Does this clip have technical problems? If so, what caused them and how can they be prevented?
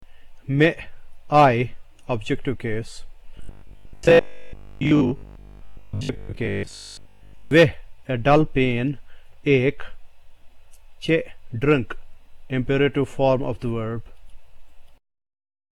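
Yes, robotic sound from repeated short buffers, 3.37 to 7.51 s: most of the audio turns into a rigid 50 Hz buzz, likely from 20 ms chunks replaying while fresh audio arrived too slowly. Larger buffers or a steadier feed would prevent it.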